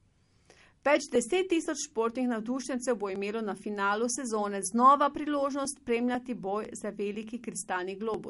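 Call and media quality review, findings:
Codec damage throughout. Plainly audible watery, swirly texture on the speech, with smeared attacks and chirpy sibilants. Nothing above 11.2 kHz. Likely cause: MP3 compression at a low bitrate, consistent with about 48 kbps. Starved encoder zeroes weak frequency lines frame to frame. Fixed treble cut-off.

Periodic USB or driver dropouts, 0.16 s to 8.14 s. Regular ticks every 0.50 s, around fifteen in all. Each skips about a millisecond of audio, with no fill. Suspect a background task blocking the USB bus or audio driver on a fixed interval.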